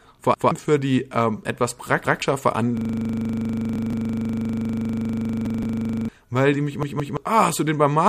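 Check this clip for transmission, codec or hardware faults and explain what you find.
Two playback faults are audible in this speech: repeated buffers and a long system hang loop.

Repeated buffer, at 0.34, 2.05, 3.76, 5.46 and 6.83 s: a stutter where about 171 ms of sound plays twice, three times at 6.83 s. Late data made the device replay its last buffer, consistent with an 8192-sample buffer, losing roughly 150 ms each time and 300 ms at 6.83 s.

System hang loop, from 2.77 to 6.09 s: a machine-gun rattle at 25 Hz as one 40 ms piece repeats. The computer or driver froze while the hardware kept cycling its ring buffer; two repeated buffers fall inside this span.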